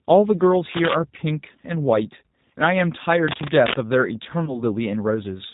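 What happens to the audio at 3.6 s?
From 3.28 to 3.74 s, a burst of cable scratch noise rasps over the speech at about the same loudness. It is most likely a worn cable or connector being moved, with contact resistance jumping rapidly. Unlike isolated clicks or crackle, it is a dense, uneven rustle lasting nearly half a second.

Beneath it, as throughout, the G.729 codec damage is plainly audible. Nothing passes above 4 kHz, and the speech has a rough, synthetic edge from being rebuilt from a vocal tract filter, a pitch predictor and sparse pulses, which fits 8 kbit/s coding. That rebuilt texture separates it from plain low-pass filtering, which would only dull the sound.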